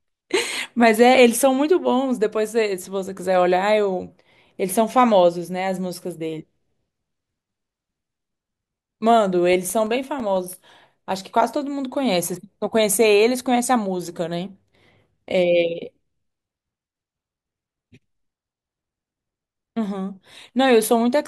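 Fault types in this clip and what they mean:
CD scratch ticks: a blemish on the disc wipes out more data than error correction can rebuild, once per revolution, so the player patches or mutes a few milliseconds each turn. Here that gives two brief runs of ticks, around 2.8 to 3.5 s and 9.4 to 10.7 s, roughly seven a second.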